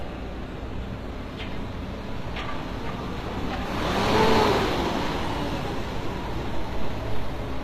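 Transcoding between lossy codecs runs throughout: nothing above 14.9 kHz, with artefacts from the different codecs stacked together, likely from a Vorbis encode re-encoded as low-bitrate HE-AAC.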